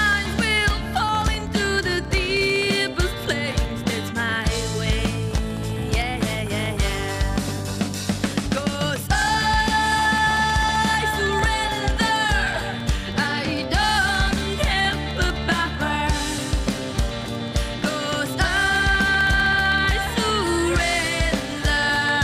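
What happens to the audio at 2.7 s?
At 2.7 s the audio is in the middle of periodic USB or driver dropouts that run from 0.06 s to 22.15 s. Every 64 ms, something blocks the USB bus or audio driver. A tiny slice of audio, around half a millisecond, is lost and filled with silence. About 300 such gaps occur across that span. They are heard as evenly spaced ticks, present only where there is signal.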